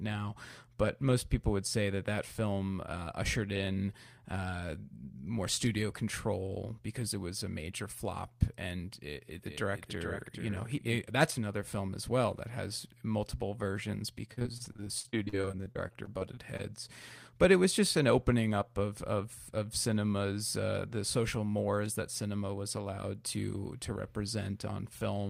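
Speech with two faults. From 9.46 to 10.96 s, after "flop and it it", a doubled audio track plays a dry copy about 400 ms late and about 5 dB quieter. It has no decaying tail, so it is not reverb or echo, and a second capture path is the likely cause. From 14.33 to 16.61 s, after "that has multiple versions", repeated packet loss leaves 25 short gaps of up to 47 ms, patched by extending the preceding sound. This gives choppy audio with pieces missing.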